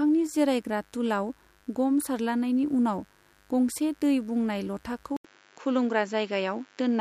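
A steady, raspy mains buzz runs under the speech throughout: switching spikes at 50 Hz and its harmonics leak into the signal, sitting roughly 35 dB below it. At 5.17 s the sound drops out for 80 ms, then returns duller and band-limited, with nothing above 7.6 kHz, a faint new noise floor and much the same level, most likely because the input switched to a poorer device.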